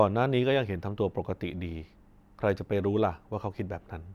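No faults detected in the speech recording: no dropouts, glitches or distortion at any point.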